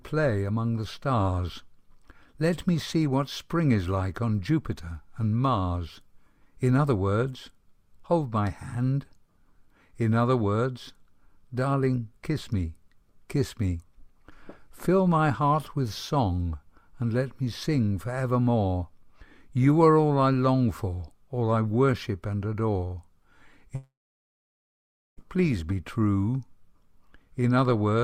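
A long network dropout runs from 23.75 to 25.19 s: the last sound smears into a brief fading buzz, then about 1.26 s of silence follows before audio resumes with roughly 1.4 s missing, likely because packets stopped arriving and the receiver could only extend what it last had.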